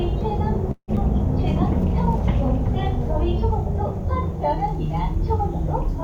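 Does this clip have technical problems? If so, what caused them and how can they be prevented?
Yes, there are two closely spaced problems early on.

At 0.71 s there's a call audio freeze lasting until about 0.91 s. The last bit of sound gets stretched into a fading buzz or hiss, then drops to about 60 ms of silence before picking up exactly where it left off, with nothing lost, just a gap of around 164 ms inserted. The likely cause is packets held up in transit, so the jitter buffer ran dry and the receiver had to improvise. A deeper or adaptive jitter buffer, plus prioritising the call traffic with QoS, would help prevent it.

Right after, between 0.96 and 1.00 s, there's a skip ahead. Playback jumps forward with only a tiny filler of about 9 ms, and roughly 70 ms of sound is simply gone, with the two sides butted together almost directly. That's audio dropped on the way, or by the buffer overflowing while later audio was already waiting. 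Letting the buffer shrink gradually by time-stretching, rather than discarding chunks, would prevent it.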